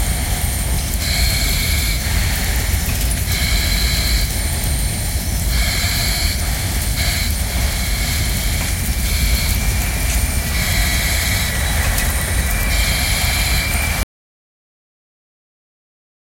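At 14.03 s the input was likely lost, leaving silence: an audio dropout to silence that cuts the sound off abruptly, with no room tone, through to the end.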